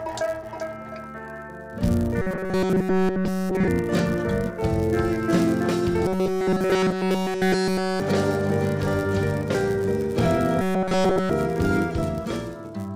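From start to finish, a filter restarted on every block puts a buzz at 100 Hz under the sound, which fits blocks of 10 ms. Each block begins from zero state and adds a small tick. The buzz rises and falls with level, and nothing is lost.

From 2.22 to 3.68 s, 6.06 to 8.00 s and 10.61 to 11.30 s, the audio turns robotic, with a rigid metallic tone at 188 Hz. This is likely repeated short buffers of about 5.3 ms standing in for audio that arrived too late. Unlike the steady block buzz, this pitch is higher, and the sound in these stretches is essentially all repeats.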